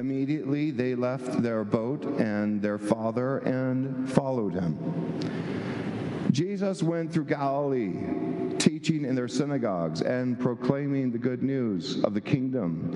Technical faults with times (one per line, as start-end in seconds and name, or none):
10.37-12.96 de-emphasis applied wrongly